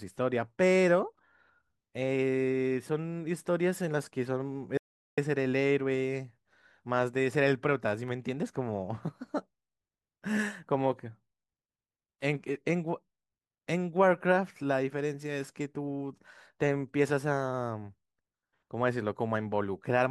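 A speech recording with one audio dropout to silence. At 4.77 s the sound cuts off mid-flow. It returns at 5.18 s. The 0.4 s gap is silent, with no room tone. The input was likely lost briefly while the recorder kept writing silence.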